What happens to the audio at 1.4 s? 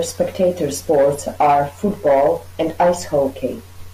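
Nothing goes wrong at 1.4 s; the speech runs straight through that moment with no dropout, click, glitch or other audible fault.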